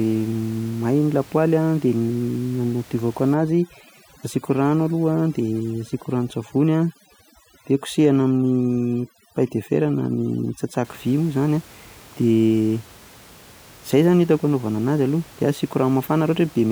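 From 3.34 s to 10.85 s the speech shows overdone noise removal. The noise reduction is working far too aggressively against the room noise, which otherwise sits about 25 dB below the speech. Any frequency band that drops close to the estimated noise level is pulled down hard or cut out. The background drops and breaks up into twinkling, chirpy specks, and the quieter parts of the voice are stripped away.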